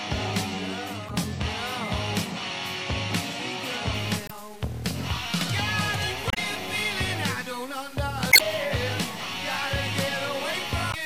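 At 1.06 to 1.10 s a short glitch cuts in: damaged data in a compressed stream. The decoder misreads corrupted frames, loses sync and searches for the next frame header.

From 3.94 s to the end, a distortion rides on the sound, roughly 25 dB below it. The likely cause is low bit depth without dither, with values truncated to about 6 bits.

The same damage recurs at 4.25 to 4.31, 6.28 to 6.38, 8.29 to 8.41 and 10.90 to 10.95 s.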